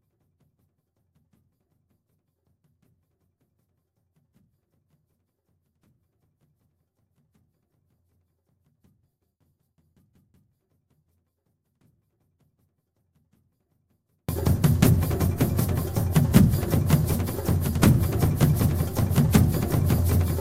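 From the start until 14.29 s, the audio suffers a 24-bit alignment error that leaves it far too quiet. The samples sit in the low 24 bits of each 32-bit word, but playback reads them as full 32-bit integers, so every value lands about 48 dB below its true level. The sound stays clean yet almost vanishes. On a waveform this stretch is a near-flat line, and a spectrogram shows the same shapes only very faintly.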